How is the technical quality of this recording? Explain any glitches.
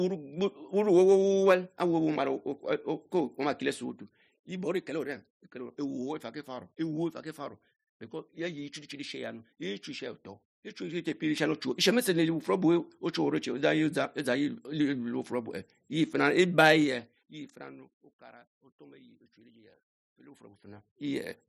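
One glitch stands out near the end of the speech. From 20.16 to 21.16 s, zipper noise: the level moves in 1 dB steps, about 30 a second, across roughly 25 dB, so each unsmoothed jump ticks audibly. On a waveform the envelope changes as a staircase, and a spectrogram shows faint vertical click lines at each step.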